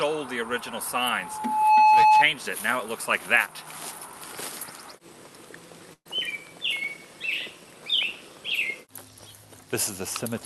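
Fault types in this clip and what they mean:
Loudspeaker feedback squeal: The microphone picked up the loudspeaker it was driving, and at one frequency the loop gain rose above unity, so that frequency kept reinforcing itself. From 1.09 s a pure tone near 860 Hz swells over roughly 0.7 s to sit around 15 dB above the program sound. It holds as a steady squeal until it stops at 2.25 s.
Burst of packet loss: A run of packets covering about 120 ms never arrived in time to be played. The receiver concealed the gap by extending the last sound it had, filling about 118 ms and fading it down, with a short stretch near-silent for roughly 50 ms. From 5.93 to 6.07 s the sound smears into a dying held texture, then resumes further along with that portion missing.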